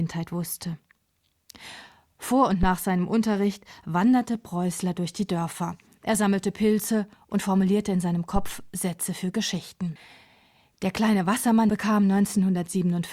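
Speech with two phantom power thumps: deep, low-frequency knocks at 2.63–2.72 s (peaking about −11 dBFS, decaying in roughly 20 ms) and 8.36–8.67 s (about −14 dBFS, roughly 69 ms decay). Each comes from a supply voltage stepping on a live input and passing through the coupling capacitors. The smooth, single-shot decay with no rustle or mechanical texture separates them from handling noise.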